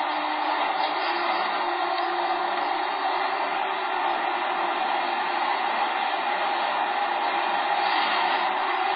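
MP3 compression damage runs throughout this recording of sounds, from start to finish. Nothing is heard above 5 kHz, and the remaining sound has a heavy watery, swirling texture with smeared attacks. The likely cause is an MP3 encoder starved of bits, which fits a very low rate around 16 kbps: it cuts all treble at a fixed frequency and drops weaker spectral lines that flicker on and off between frames.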